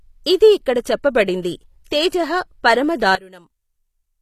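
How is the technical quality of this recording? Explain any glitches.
The recording has three audible problems: codec damage throughout, two brief smears, and a sudden level collapse near the end.

HE-AAC compression: The speech was likely encoded with HE-AAC at a low bitrate, around 24 kbps by the sound. Its treble is synthesised by band replication, so the upper spectrum sounds plainly artificial, with nothing above 14.9 kHz.

Pre-echo: At 1.84 to 1.86 s and 2.09 to 2.12 s, the transform codec spread quantisation noise across each block. A hiss lasting 21 ms and then 32 ms leaks in just before the attack, softening it.

One channel inverted: From 3.15 s to the end, one stereo channel was likely polarity-reversed before the mono fold-down. The shared content cancels, and the level drops by about 22 dB, leaving only a residual copy.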